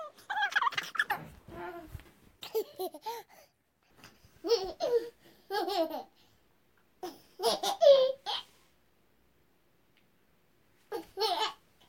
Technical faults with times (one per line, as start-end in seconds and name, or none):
0.00-1.11 audio read two samples at a time (double speed)